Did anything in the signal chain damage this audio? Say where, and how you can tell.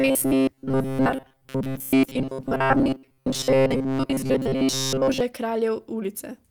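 Yes. From 0.01 s to about 5.2 s the speech turns into a rigid, metallic buzz pitched at 133 Hz. It loosely follows the words. This is robotic sound from repeated short buffers, most likely a driver or buffer stage starved of input. When new audio arrived too late, the last fragment of about 7.5 ms was replayed instead. That repetition rate sets the fixed 133 Hz pitch, and most of the real signal was dropped.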